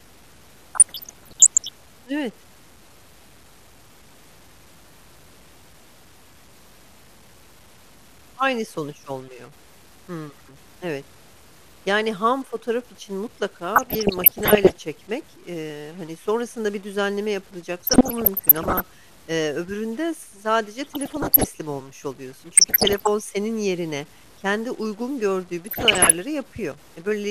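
From the first second to the end, the speech carries an edge of added noise, and pauses fill with a hiss that follows the sign of the quietest samples rather than falling silent. This is most likely a stuck bit, with one data line held at a fixed value so that about half the samples are offset by that bit's weight. On a waveform, silent stretches sit on a thin band of jagged noise. On a spectrogram, the distortion smears broadband energy across the whole frequency range.

Also present throughout is a dull, muffled tone with a gurgling, granular texture. The likely cause is MP2 compression at a bit budget that fits around 80 kbps, which is too thin for the coder to keep every sub-band. It switches upper bands off and quantises the remaining ones coarsely. A spectrogram shows a ragged high-frequency ceiling, with blocks of the top bands blinking in and out from frame to frame. The codec damage is plainly audible.

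DAB burbling breaks out in six bursts, at 0.75 to 1.74 s, 13.76 to 14.77 s, 17.84 to 18.84 s, 20.85 to 21.45 s, 22.52 to 23.07 s, and 25.66 to 26.13 s. Each brings short blips of noise in single sub-bands laid over the speech. Bit errors slip through into the coded audio, pointing to an error rate around one percent. A spectrogram shows isolated horizontal bars flaring briefly inside those spans.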